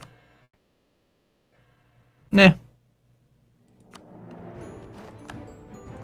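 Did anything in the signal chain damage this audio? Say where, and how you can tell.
Yes. From 0.43 to 1.58 s the sound smears into a fading buzz, then sits near-silent for about a second, and picks up again with roughly 0.96 s missing. That's likely a long network dropout, with the receiver stretching the last audio before giving up.

Right after, from 1.76 to 3.19 s, there's a jitter buffer speed-up: playback runs about 8% fast at unchanged pitch, so it sounds hurried. The receiver is snipping out pitch-period-sized pieces, roughly 150 ms in total, to work off the delay left after the gap.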